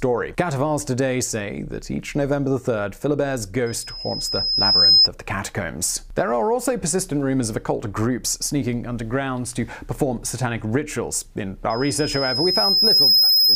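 Loudspeaker feedback squeal rises at 3.66 to 5.08 s and again from 11.70 s to the end: a single 5.1 kHz tone swelling over about a second and a half to roughly 10 dB above the sound. That gradual swell shows a microphone-loudspeaker loop exceeding unity gain, unlike a steady interference whine.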